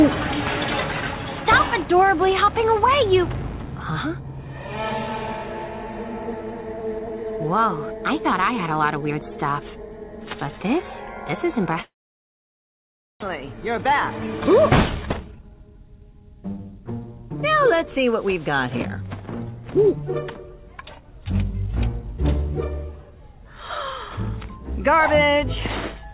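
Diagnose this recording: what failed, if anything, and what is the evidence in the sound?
The failure is at the network stage, during a long network dropout. At 11.82 s the sound turns into a fading buzz and then goes quiet. Silence holds for about 1.3 s, until 13.37 s. When the sound returns, roughly a second of it is simply gone. The receiver stretched the last received audio into the gap, then gave up and muted. The likely cause is a burst of lost packets, which also pushed the playout delay up by a few hundred milliseconds.

A jitter buffer speed-up follows in the receiver's buffer stage, from 14.54 to 16.88 s. The sound runs hurried, about 115% of normal speed, but its pitch stays put. That combination points to time compression. Short pitch-period slices are cut out repeatedly, trimming a few hundred milliseconds in total. The buffer does this to shed the extra delay it built up after the dropout. 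Throughout, the G.711 mu-law call path caps the sound at 4 kHz.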